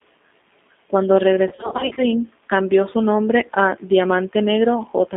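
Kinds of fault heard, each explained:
G.729 codec: rough, synthetic speech fitting an 8 kbit/s codec; the spectrogram shows energy held between about 250 Hz and 3.5 kHz, with nothing above.
VoIP packet loss concealed by the speech codec: from 1.49 to 2.01 s, gaps of up to 40 ms become buzzy tones or coloured noise that fade, seen as waveform dips and smeared harmonics.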